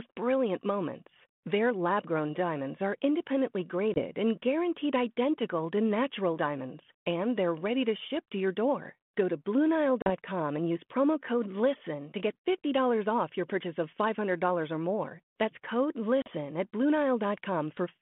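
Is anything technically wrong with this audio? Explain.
Yes, there is packet loss on an ADPCM call at 3.94 to 4.04 s, just before "and guaranteed identical to", then at 10.02 to 10.11 s and 16.22 to 16.31 s. Roughly one packet (20 ms) and then two (40 ms each) go missing. Silence fills each gap, and the decoder's adaptive predictor and step size drift from the sender's. The result is a hard-edged dropout followed by speech returning slightly distorted, settling within tens of milliseconds. The underlying band-limited telephone coding sounds consistent with 32 kbit/s G.726 ADPCM.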